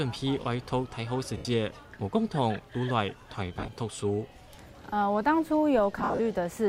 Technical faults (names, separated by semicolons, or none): lost LE Audio frames